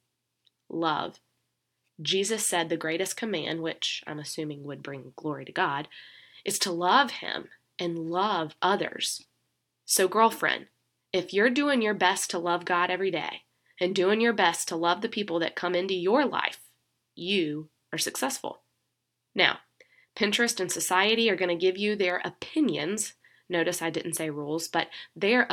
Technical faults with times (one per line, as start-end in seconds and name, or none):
none